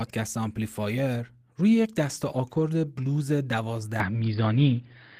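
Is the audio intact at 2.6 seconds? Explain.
No. Between 2.55 and 2.61 s, a lost packet was rebuilt from error correction. Packets went missing in transit, which fits two lost packets, but each following packet carried a low-bitrate backup copy, and the decoder played those in their place. About 40 ms of the speech was rebuilt this way. Because nothing was dropped outright, there is no gap or silence. Instead, that short stretch sounds coarser and noisier than the audio around it.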